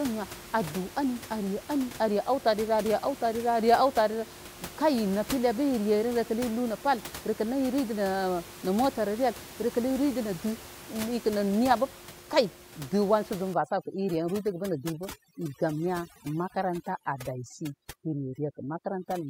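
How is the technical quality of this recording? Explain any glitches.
One glitch stands out. The room's background noise sits about 16 dB below the speech, but the fault lies elsewhere.

From 13.54 s to the end at 19.30 s there is overdone noise removal. A noise reducer set far too hard cuts individual frequency bands whenever they approach its noise estimate. Quiet parts of the speech vanish with them. The background drops and breaks up, flecked with twinkling specks.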